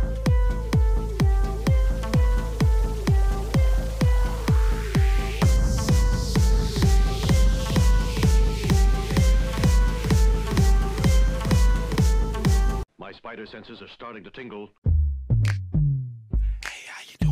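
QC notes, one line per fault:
6.52–11.96 s, doubled audio track: a second copy of the sound runs about two seconds behind at roughly 10 dB down, dry and full-band, cutting in and out abruptly. The likely cause is a slower second capture path or an edit holding two offset copies.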